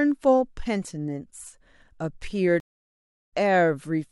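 Stream reconnect at 2.60 to 3.30 s: the connection dropped, leaving 0.70 s of silence, then a fresh decoder resumed the speech roughly half a second further on.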